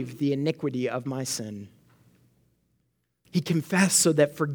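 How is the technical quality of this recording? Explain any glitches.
Nothing here needs explaining, as there are no glitches, dropouts or other technical faults to be heard anywhere in the recording.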